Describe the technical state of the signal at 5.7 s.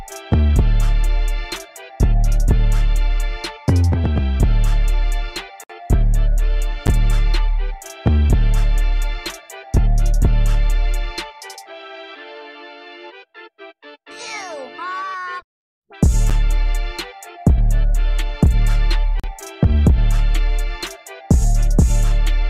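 A gap at a join of encoded pieces opens from 5.64 to 5.70 s, a 59 ms silence with smeared edges. Two separately encoded pieces were joined untrimmed, so encoder delay and last-frame padding remain. The sound then resumes where it stopped. This recurs every 10 s.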